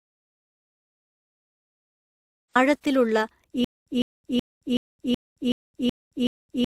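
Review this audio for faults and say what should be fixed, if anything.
The speech carries layered compression artefacts throughout: smeared, swirly high end over a band-limited, slightly metallic texture, which points to transcoding between lossy codecs, likely a WMA encode at around 96 kbit/s re-encoded as Opus at 32 kbit/s. On a spectrogram the upper band stops at one hard ceiling and shows blotchy, patchy high-frequency detail. Keep a lossless master and encode only once, to the final format.

From the start until 2.55 s there is an audio dropout to silence. It is already under way when the clip opens, and the speech only arrives at 2.55 s. The gap is silent with no room tone, likely because the input was lost while the recorder kept writing. It shows as a flat line on the waveform and an empty spectrogram. Monitor input connections and mute states so that capture never runs without a live feed.

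From 3.64 s to the end there is a stutter with silent gaps. A 154 ms fragment replays eight times, each followed by about 221 ms of digital silence, so the bursts repeat every 375 ms. The likely cause is a stalled player or stream re-sending its last buffer. The waveform shows identical blocks separated by flat silence, and the spectrogram shows repeating stripes. Give the playback or streaming path enough buffering, and let it conceal losses rather than loop on a stall.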